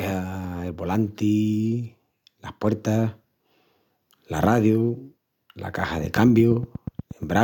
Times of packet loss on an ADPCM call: none

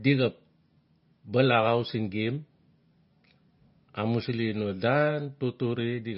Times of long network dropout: none

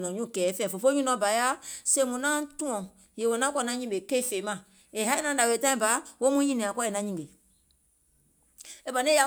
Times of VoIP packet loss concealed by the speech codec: none

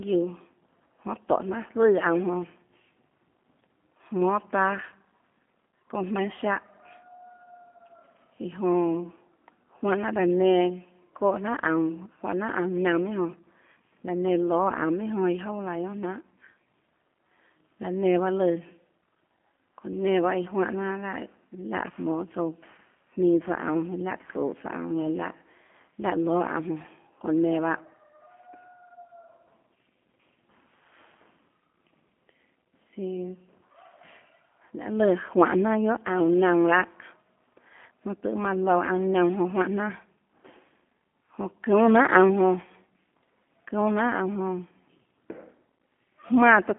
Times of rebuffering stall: none

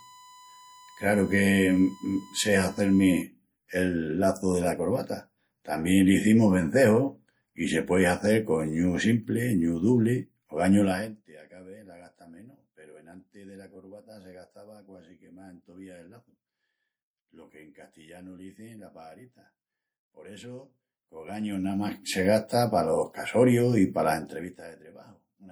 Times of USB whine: 0.00-3.22

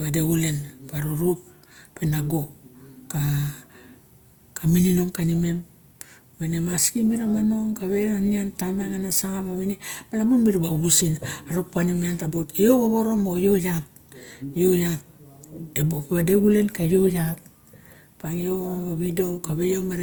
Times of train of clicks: none

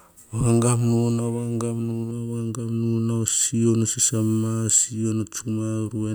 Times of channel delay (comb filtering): 2.11-6.14

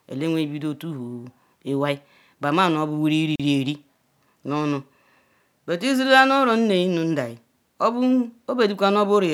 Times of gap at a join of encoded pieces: 3.36-3.40

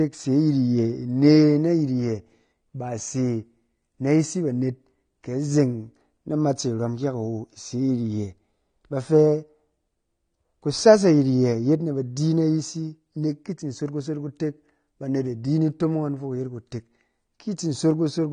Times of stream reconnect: none

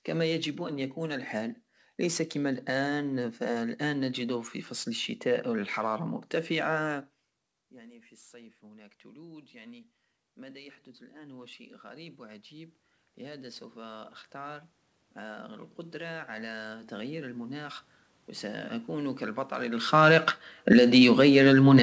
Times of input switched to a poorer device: none

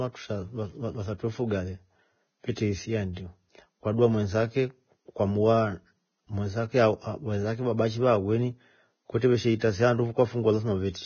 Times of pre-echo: 9.59-9.61

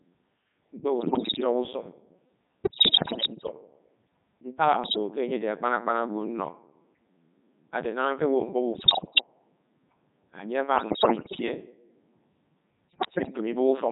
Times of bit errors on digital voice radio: 0.98-1.44, 2.64-3.51, 4.84-4.97, 8.72-9.26, 10.76-11.42, 12.88-13.37

